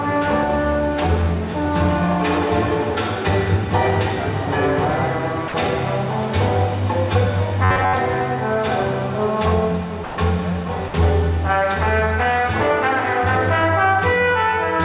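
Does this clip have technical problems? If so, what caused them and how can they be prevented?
Yes. Sound dropped by the voice detector appears three times: 5.48 to 5.54 s, 10.04 to 10.18 s, and 10.88 to 10.94 s. Each gap is filled with steady comfort noise for 60, 140 and 60 ms. The likely cause is the sender's detector judging the sound as background and stopping transmission. Lowering the detector threshold and adding hangover time would prevent it.

From 7.64 to 7.94 s there is robotic sound from repeated short buffers. A rigid buzz at 93.8 Hz replaces most of the real sound. That pitch points to a chunk of about 10.7 ms being replayed while new audio is likely arriving too late. A larger jitter buffer and steadier packet delivery would prevent it. Throughout, the call path's narrowband limit is audible, with nothing above 4 kHz.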